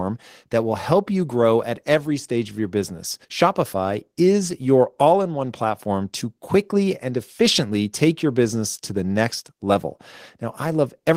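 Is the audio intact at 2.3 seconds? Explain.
Yes, the speech at 2.3 seconds is intact, with no audible fault at that moment.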